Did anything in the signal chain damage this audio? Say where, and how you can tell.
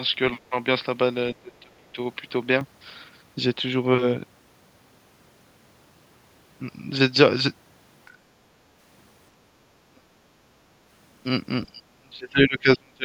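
Yes. Right from the start until 2.61 s the audio sounds like it came through a different, poorer input. The level sits around 5 dB lower, and there's a faint new noise floor, something like 45 dB under the speech. At 2.61 s it opens back up with no gap at all. That's at the driver or device-routing stage, and the likely cause is the system having briefly picked up a lesser microphone or a headset's call profile.

The speech itself gets pushed down in four places: 1.35 to 1.98 s (dips of roughly 25 dB across about 400 ms), a quick 10 dB-ish nick at 8.09 to 8.14 s, 9.85 to 10.05 s (around 25 dB), and 11.66 s to the end, where it sinks as far as roughly 35 dB for about a second and a half. This is call processing, and the likely cause is speech suppressed in double talk. The echo canceller couldn't tell this talker apart from the far end's echo, so it clamped down on both.

There's also a short moment where the background gets gated by the echo canceller, from 9.49 to 9.57 s. 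The room tone drops by about 8 dB for roughly 70 ms and then comes straight back. That's the same call-processing stage ducking the microphone while the loudspeaker was active and releasing it once it judged the echo gone.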